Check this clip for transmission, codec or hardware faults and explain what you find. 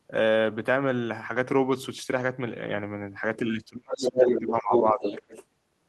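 There are two echo-control faults here, both in the back part of the clip.

From 3.42 to 5.29 s there's speech suppressed in double talk. The echo canceller likely mistook the overlap for echo and ducked the talker by up to about 30 dB, for roughly 1.5 s in patches.

There's also the other side's voice leaking through, likely uncancelled loudspeaker echo. It comes in at 3.92–4.4 s about 5 dB above the talker, briefly at 4.73–4.82 s at about the same level, then at 5.01–5.45 s roughly 10 dB down.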